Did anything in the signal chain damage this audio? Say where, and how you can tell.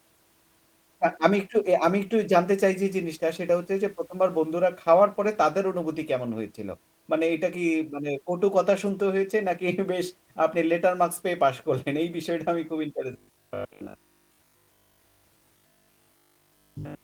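Yes. Between 13.13 and 17.03 s the speech turns into a rigid 50 Hz buzz, robotic sound from repeated short buffers. A starved buffer likely kept replaying its last roughly 20 ms most of the time.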